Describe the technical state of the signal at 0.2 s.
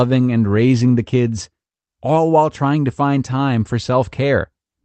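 At 0.2 s the speech is intact, with no fault present, and what reaches the ear is simply the normal sound of a call path running through the Opus codec, with its top end limited to around 8 kHz.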